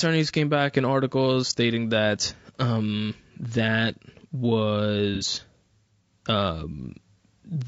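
Low-delay AAC compression runs through the whole of this speech clip, with plainly audible codec damage: the voice sounds rough and grainy, with noise between the harmonics and a thin, synthetic top band. The likely cause is AAC-ELD at a bitrate of around 32 kbps. AAC frame loss with concealment occurs from 5.15 to 5.24 s: about 60 ms of audio drops out, and the decoder patches the gap from the last good spectrum, leaving a short smeared, noisy patch.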